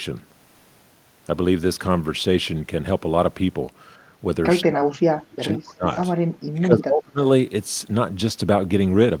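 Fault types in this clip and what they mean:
Speech suppressed in double talk: From 4.65 to 5.85 s and 6.52 to 7.19 s the speech dips by roughly 30 and 25 dB, likely from an echo canceller ducking during overlapping talk.
Echo leak: Brief delayed copies of the speech surface at 5.5 s and 5.93 s, about 20 to 25 dB down, likely echo slipping past the canceller.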